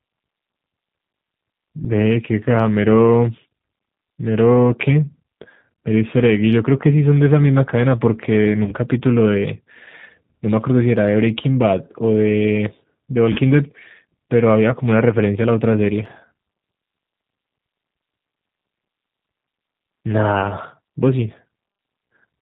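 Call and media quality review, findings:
G.729 codec, whole clip: speech band-limited below 4 kHz, plainly rough and synthetic; filter-plus-pulse rebuild at 8 kbit/s, which fits the G.729A variant.

VoIP packet loss concealed by the speech codec, 8.64–8.74 s and 13.33–13.40 s: about 30 ms dropped each time; decoder extrapolates last pitch and filter with falling gain, voice weak until recovery.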